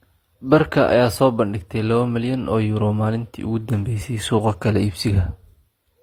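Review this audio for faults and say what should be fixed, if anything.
Throughout the speech, two layers of codec artefacts overlap. This is likely transcoding between lossy codecs, fitting HE-AAC followed by Opus, each near 32 kbit/s. Encode from the original source once, not from an already compressed file.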